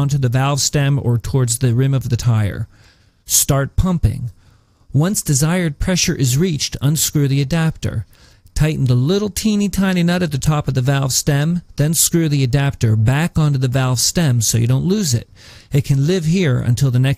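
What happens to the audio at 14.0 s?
Nothing goes wrong at 14.0 s; the audio plays through that point intact.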